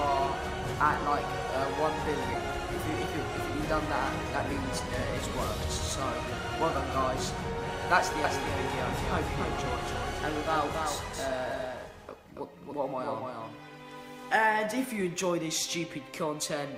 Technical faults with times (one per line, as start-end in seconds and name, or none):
8.24-14.33 doubled audio track
11.05-11.92 jitter buffer speed-up